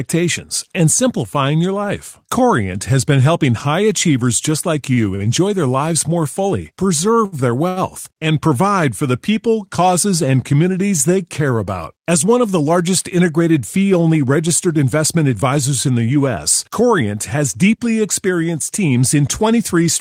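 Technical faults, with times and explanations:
4.93 to 5.00 s, 5.15 to 5.26 s, 7.25 to 7.35 s and 7.68 to 7.79 s, short stall from a late packet: after "high achievers just like" and before "their lives more fully", then twice more, sound is held 40, 50, 67 and 82 ms while the receiver waits for a late packet. It resumes where it stopped with nothing skipped, unlike a dropout.
15.87 to 17.06 s and 18.79 to 19.74 s, jitter buffer speed-up: after delayed audio piled up, and again after "deeply experienced", about 70 ms is trimmed each time in pitch-period slices. Speech runs at 105% and 107% at unchanged pitch, sounding hurried rather than held or gapped.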